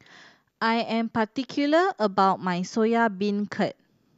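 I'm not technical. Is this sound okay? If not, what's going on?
Yes, this sound is okay, and nothing is going wrong in it.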